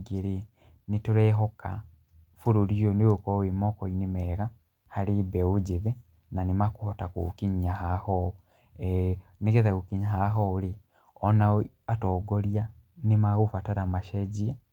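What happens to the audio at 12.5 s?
Nothing goes wrong at 12.5 s; the speech runs on intact through that moment, with no dropout, click or distortion.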